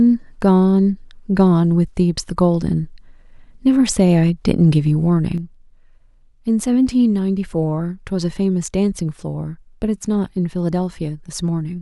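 At 5.38 s the speech abruptly drops by about 6 dB and stays there to the end, likely because one channel drops out before the mono sum. The waveform envelope visibly halves in height there, and the spectrogram dims evenly across all frequencies.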